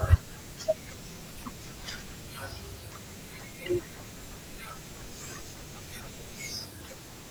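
No technical faults can be heard anywhere in the recording; the signal holds steady throughout.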